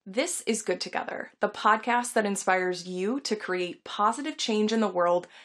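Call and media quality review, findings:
No faults found in the speech clip. No symptom to log, so no component or mechanism to attribute.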